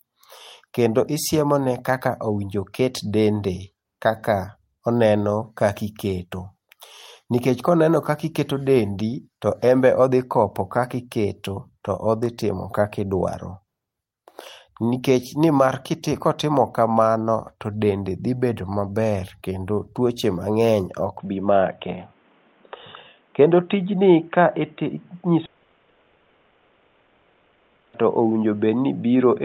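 At 21.18 s the sound turns dull and boxy and stays that way to the end of the clip, with nothing above 3.8 kHz. There is no silence at the change and no real jump in level, but a new background noise comes in about 40 dB below the speech. The likely cause is an input switched to a poorer device, such as another microphone or a headset's call profile, whose narrower band and own noise replace the original path.

From 25.45 s to 28.03 s a long network dropout interrupts the sound, within that narrowed stretch. For about 2.5 s the receiver fills the gap with a synthesized continuation of the last audio, a buzz or hiss with no stretch of true silence. When the sound returns at 28.03 s it picks up further on, and the roughly 2.5 s in between is simply gone. This pattern is likely caused by packets failing to arrive and the receiver concealing the loss.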